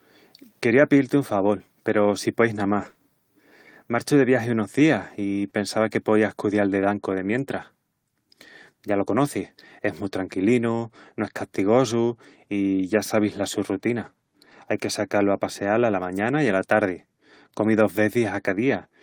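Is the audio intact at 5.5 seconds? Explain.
No, not quite. At 5.45 s there's a lost packet rebuilt from error correction. One 20 ms packet went missing, and the decoder played the low-bitrate backup copy carried in the next packet. There's no gap, but that sliver sounds rougher and noisier. Right after, from 5.49 to 5.53 s, there's a short concealed packet loss. About 20 ms never arrived in time, so the receiver extended the last sound to fill the hole and blended back in. You get a brief smear or wobble just before "pensava que poías cudial".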